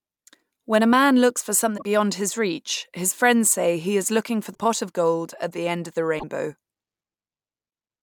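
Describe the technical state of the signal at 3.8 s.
At 3.8 s the speech signal is intact, with no audible dropout, distortion, clicks or other technical fault at that moment.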